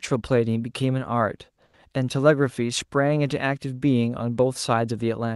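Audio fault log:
1.65–1.73 s, comfort noise in place of the background: with only quiet background present, about 39 dB below the loud parts, the sender's voice detector stopped transmission, likely through Opus discontinuous transmission, and the receiver filled the 80 ms gap with synthetic noise. The real background briefly gives way to a flat, featureless hiss about 5 dB quieter, a brief dip in the room tone before the sound resumes, under a call-codec band edge near 12 kHz.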